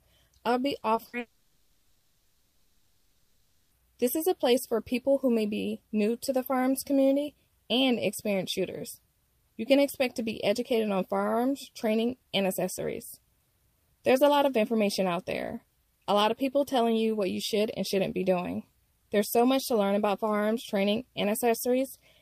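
At 0.79 to 0.83 s and again at 0.95 to 0.99 s there is short concealed packet loss. Each time about 20 ms of audio failed to arrive, and the receiver extended the preceding sound to cover it, leaving a brief smear or wobble in the sound.

At 1.07 to 1.15 s a burst of packet loss removes about 60 ms. Concealment stretches the last sound into a short held buzz or fading hiss, and playback then picks up further along with that stretch missing.

From 1.19 to 3.73 s the sound is replaced for about 2.5 s, most likely by a long network dropout. The receiver keeps synthesising a continuation of the last sound as a decaying buzz or hiss, never reaching true silence, before the real audio returns later on.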